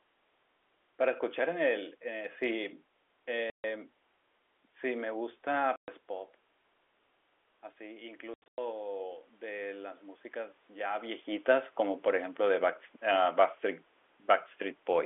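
At 3.5 to 3.64 s and 5.76 to 5.88 s the speech drops into dead silence for 140 ms and 120 ms, with hard edges: packet loss filled with silence, in steps that fit 20 ms packets.

From 7.77 to 11.3 s, after the input falls by about 12 dB, voice and room noise swell together by about 6 dB. That is automatic gain rising to compensate.

Inside that swell, from 8.34 to 8.58 s, more packet loss filled with silence leaves scattered gaps totalling 200 ms, the longest 100 ms.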